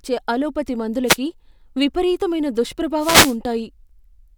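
At 1.06 to 1.17 s and 2.98 to 3.37 s, wireless microphone noise hits occur. The FM radio signal fades, so receiver static swishes over the speech.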